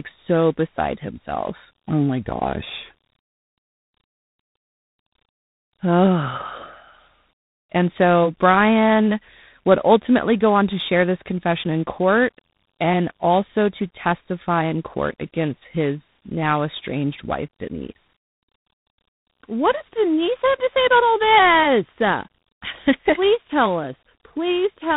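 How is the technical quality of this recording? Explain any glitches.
Quality is limited by one fault present throughout: tandem speech coding. The speech was encoded and decoded at least twice in a row, and each coder worked on the previous one's degraded output. The roughness and noise fit a chain like CVSD, then A-law G.711, then G.726 at about 24 kbit/s. The sound is grainier and noisier than a single codec would leave it, and nothing remains above 3.9 kHz.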